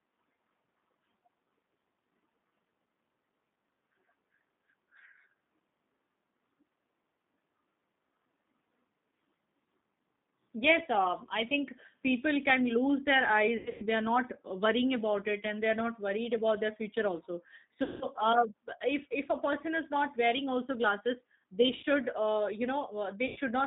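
Speech squeezed through what sounds like a G.729 codec the whole way: the band sits between about 150 Hz and 3.7 kHz, and there's a plainly rough, slightly synthetic edge from rebuilding the voice out of a filter and a few pulses, consistent with an 8 kbit/s line. On top of that, there's VoIP packet loss concealed by the speech codec at 13.57–13.86 s (about 210 ms gone in scattered gaps), 17.83–18.07 s right after "about their future also", 21.77–21.85 s between "wearing also glasses they" and "uh you", and 23.27–23.38 s. Each time the decoder stretches the last sound into a fading buzz or coloured noise, and the voice stays weak briefly afterward.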